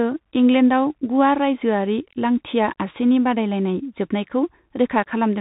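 Speech passed through a Bluetooth CVSD headset codec for its whole length, a narrowband link that sends one bit per sample to step the waveform up or down, which fits a 64 kbit/s stream. Nothing above 4 kHz survives, so the sound is muffled and telephone-like. The adaptive step can't keep up with loud, bright moments, which distort, s sounds turn scratchy, and a grainy hiss sits beneath the speech throughout.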